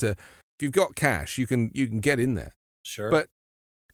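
Listening through the speech, nothing stood out as a technical fault at any point.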